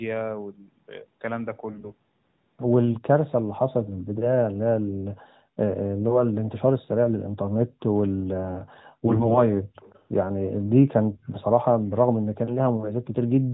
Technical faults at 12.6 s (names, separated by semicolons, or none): none